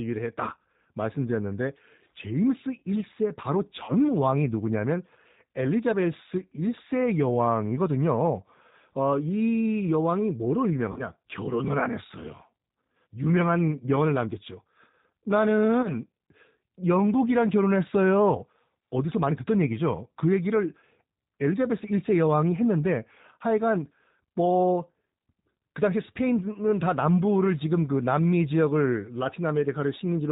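Throughout, the speech shows plainly audible G.729 codec damage: nothing above 4 kHz and a rough, synthetic texture consistent with an 8 kbit/s stream.

At 3.84–3.95 s, 10.92–11.03 s and 15.82–15.93 s, VoIP packet loss concealed by the speech codec stretches the voice into a buzzy tone or coloured noise that fades. The first two cover 40 ms of missing audio and the third 20 ms, and the speech stays weakened briefly afterward.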